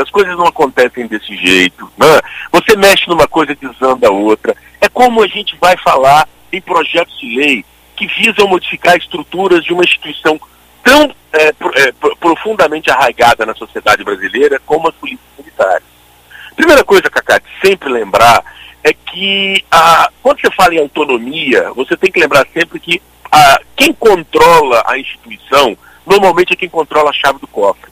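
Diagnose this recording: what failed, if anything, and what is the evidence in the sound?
Hard clipping runs through the whole recording: peaks drive about 8 dB past the converter or sample format's ceiling and are sliced flat, with about 4 percent of samples clipped. The squared tops add high harmonics, heard as harsh fuzz on every loud passage.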